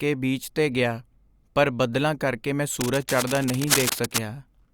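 From 2.81 s to 4.19 s, right after "ਪਰ ਬੱਦਲਾਂ ਕਰਕੇ ਮੈਂ", cable scratch noise rides over the speech as a harsh, uneven rustling only a little quieter than the voice itself. The likely cause is a worn cable or connector being moved, so its contact resistance jumps about rapidly. On a waveform this shows as dense, jagged spikes riding on the signal; a spectrogram shows irregular broadband streaks smeared across the whole frequency range for that stretch.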